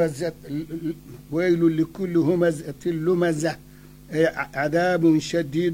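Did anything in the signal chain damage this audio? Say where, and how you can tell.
No, no chain damage heard.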